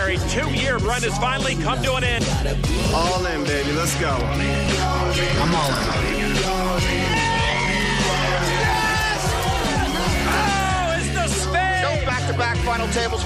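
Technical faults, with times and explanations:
2.19, 4.66, 7.14, 9.62 and 12.09 s: audio missing between chunks. Each is a brief skip where around 20 ms of sound drops out. The audio on either side is joined directly with no silence, so the sound jumps forward. The skips recur at a steady spacing of about 2.5 s. That spacing likely comes from a recorder or processor handling the audio in 2.5 s blocks and losing a moment each time it closes one block and opens the next.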